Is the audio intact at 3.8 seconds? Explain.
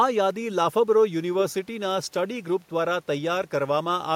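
Yes, the audio is intact at 3.8 seconds, with nothing there beyond the room's own background noise sitting about 40 dB below the speech.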